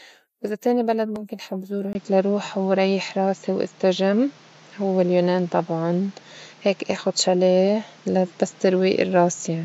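At 1.93 s, right after "بلد مُمكن حب زورو", a 20 ms gap leads into duller, boxier speech cut off above 7.6 kHz, with a level jump of roughly 5 dB and new background noise. This is likely an input switched to a poorer device. A spectrogram shows a hard ceiling, and the waveform shows a brief flat break.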